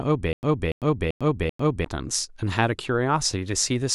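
Stutter with silent gaps, from 0.33 to 1.85 s: a short fragment of speech, about 288 ms long, plays four times in a row, each time followed by 100 ms of dead digital silence, so the burst returns at a steady 388 ms period. The likely cause is a stalled player or stream that replayed its last buffered fragment on each retry and then ran dry. The speech that belonged in that stretch is missing.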